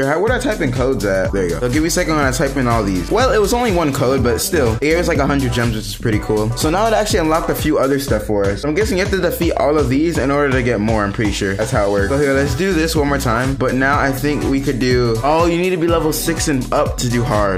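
No technical faults can be heard anywhere in this audio.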